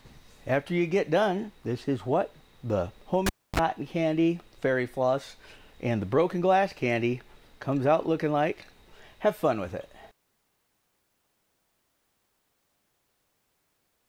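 At 3.26 s the cable is pulled and plugged in: a pop, 283 ms of near silence, a 35 ms 50 Hz mains buzz, then another pop. The spectrogram shows vertical click lines around a gap with a low hum band.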